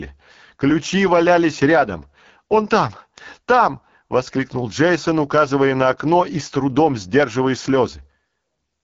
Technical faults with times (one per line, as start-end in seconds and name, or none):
0.00-8.84 AMR wideband (HD Voice) codec